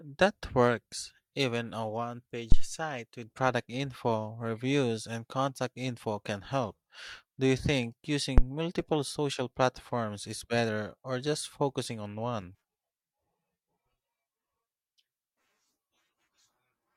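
At 2.52 s a phantom power thump hits, lasting to about 2.68 s, and a second, shorter one comes at 8.38 s, ending near 8.44 s. Each is a supply being switched on a live input, the voltage step pushed through the coupling capacitors as a low, dull knock peaking around −8 dBFS. On a waveform each shows as a large one-sided swing decaying within 36 ms and 14 ms; a spectrogram shows a brief dark smear confined to the bottom octaves.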